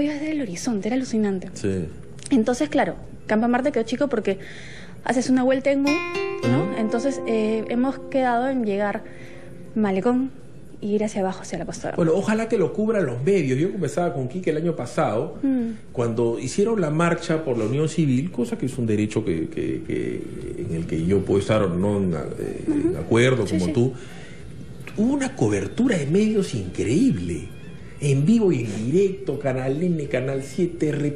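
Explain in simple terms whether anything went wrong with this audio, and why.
Nothing went wrong with this recording that a listener can hear. There are no dropouts, glitches or sudden changes anywhere in it.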